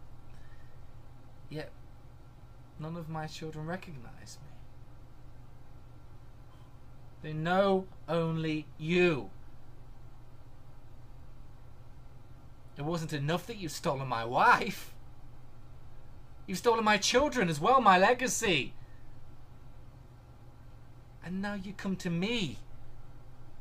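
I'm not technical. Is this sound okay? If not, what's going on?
Yes, nothing in this sound stood out as a problem when listening to it.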